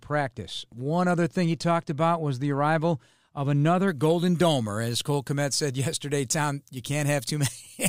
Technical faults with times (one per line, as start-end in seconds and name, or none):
3.88-7.88 pre-emphasis left on